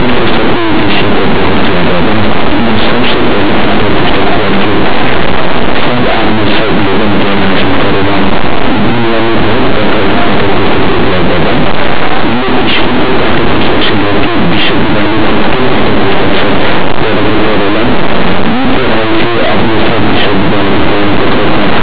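From start to end, linear audio read as companded: plain 8-bit samples expanded as mu-law, so values just on one side of zero turn into the largest outputs while those on the other side stay small. That gives harsh distortion, far louder than the faint grain of properly read 8-bit audio.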